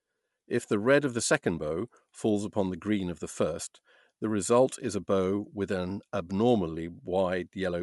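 From start to finish the speech has a breathy, grainy edge on sibilants and upper harmonics, and the band stops abruptly with nothing above 11.6 kHz. The texture and cutoff point to Bluetooth LC3 compression as the likely cause. The transform codec discards much of the upper spectrum and fills the gaps with shaped noise, leaving plainly audible codec damage. The artefacts fit a rate of around 48 kbps and LC3's 10 ms frames.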